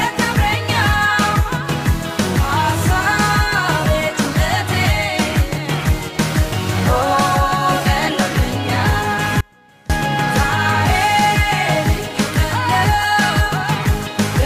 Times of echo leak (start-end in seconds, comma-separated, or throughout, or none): none